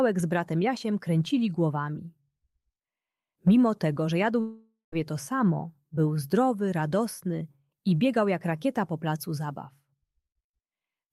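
From 4.40 s to 4.93 s the audio breaks off and is replaced by a continuation of the last sound, a buzzing or hissing tail that decays over the gap and ends in about 140 ms of silence before the signal resumes. About 520 ms of material is simply gone, with playback picking up later rather than where it stopped. This is the signature of a long network dropout, most likely a run of lost packets that the receiver's concealment could only paper over.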